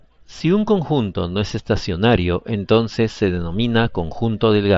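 No technical faults are heard.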